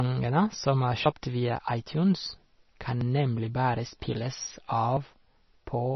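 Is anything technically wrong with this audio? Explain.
Yes. Two faults are audible in this speech.

MP3 compression, throughout: the sound is heavily damaged in the way a likely starved MP3 encoder leaves it. Nothing is present above 5.9 kHz, which fits a bitrate of around 25 kbps. With too few bits, weak frequency lines flicker between frames, giving a watery, swirly texture and smeared consonants.

Audio missing between chunks, at 3.01 s: a short skip of roughly 40 ms, likely lost at a boundary between 2-second processing blocks. The sound on either side is butted together without silence, so the speech jumps abruptly instead of flowing.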